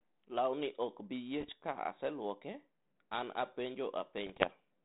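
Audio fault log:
1.38–1.52 s and 4.27–4.51 s, bit errors on an ADPCM link: pops and rough, gritty bursts with brief jumps in level, around one percent of bits flipped in the first and slightly fewer in the second. Each flipped bit throws off the decoder's step size and prediction, so the damage rings on for milliseconds instead of clicking once. The sound never drops out, which sets this apart from lost packets, and the steady 32 kbit/s G.726 coding underneath stays band-limited below 4 kHz.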